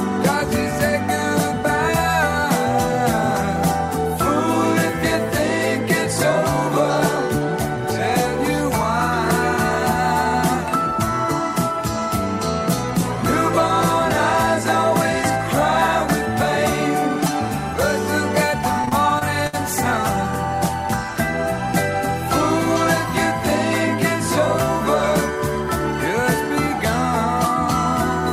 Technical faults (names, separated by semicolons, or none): repeated packet loss (robotic sound)